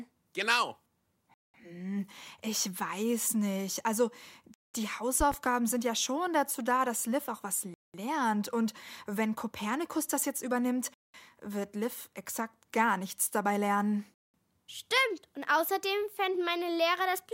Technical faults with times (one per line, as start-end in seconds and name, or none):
1.34-1.54 gap between chunks
4.54-4.74 gap between chunks
5.20-5.36 loud pop
7.74-7.94 gap between chunks
10.94-11.14 gap between chunks
14.14-14.34 gap between chunks